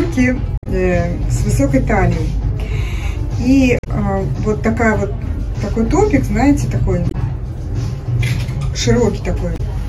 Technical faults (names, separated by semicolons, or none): damaged data in a compressed stream